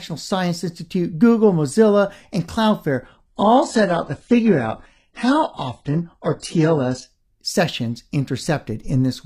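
Speech clip with an adaptive stream dropping to a lower bitrate from 3.07 to 7.07 s: quality falls abruptly with no gap, nothing above 11.1 kHz, and a thin top end that fits a switch from around 96 kbit/s AAC to a 12 kbit/s HE-AAC rendition, then snaps back.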